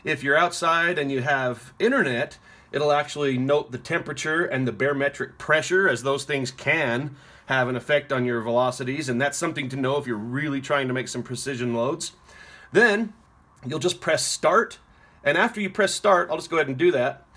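No technical faults can be heard anywhere in it.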